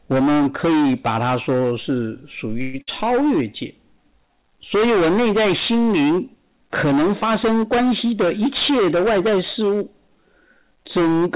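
From start to finish the speech carries a harsh, gritty fuzz on every loud syllable, a rasp that rides on top of the narrow band of the call path, which passes nothing above 4 kHz. This is hard clipping: the signal was driven about 21 dB past what a stage in the chain could handle, so close to a third of all samples are sliced flat at that stage's limit. Those squared-off peaks spray harmonics up the spectrum, turning every emphatic sound into distortion.

At 2.62 s the sound stalls into a brief held, fading sound lasting about 115 ms, then carries on at 2.76 s exactly where it left off, with nothing skipped. This is a call audio freeze, likely caused by packets held up in transit so that the jitter buffer ran dry. The receiver stretched the last sound to cover the wait, which adds a small pause and pushes everything after it about 115 ms later.

Only a moment later, from 2.82 s to 2.89 s, there is a short fading smear, and the sound then jumps ahead with a piece gone. 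This is a burst of packet loss: around 60 ms of audio never arrived in time. The receiver covered the hole for about 58 ms by continuing and fading the last sound, then resumed further along, so what fell in that gap is lost.

Between 8.05 s and 9.61 s the speech turns briefly hurried, running about 6% fast while its pitch stays unchanged. This is a jitter buffer speed-up: with more audio banked than it wanted, the receiver trimmed many tiny slices, each one or a few pitch periods long, in quick succession to shrink the delay. Together they remove about a tenth of a second, which is heard as a slight rush in delivery.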